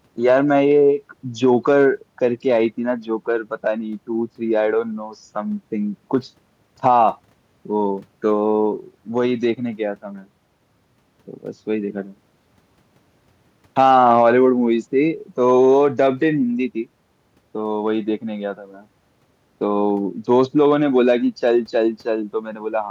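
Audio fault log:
No technical faults can be heard anywhere in the speech signal.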